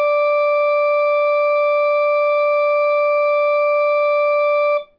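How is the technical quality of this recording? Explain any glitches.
The recording has one fault, present from start to finish: aliasing. The music has been resampled without an anti-aliasing filter, in a way that fits a drop from 44.1 kHz to 11 kHz. Everything above the 5.5 kHz fold point reflects back down as unrelated tones, roughly 35 dB below the music. Bright content sounds gritty and metallic, and the spectrum runs hard up to the 5.5 kHz band edge.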